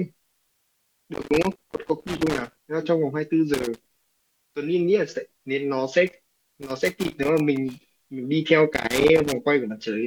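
Loose connector crackle breaks into the speech four times: from 1.14 to 2.66 s, 3.54 to 4.06 s, 6.07 to 7.87 s, and 8.74 to 9.32 s. A worn or dirty contact is rapidly losing and regaining connection, chopping the signal into irregular scratchy bursts. On a waveform each burst shows ragged gaps and spiky transients. A spectrogram shows scattered vertical broadband streaks over the speech harmonics.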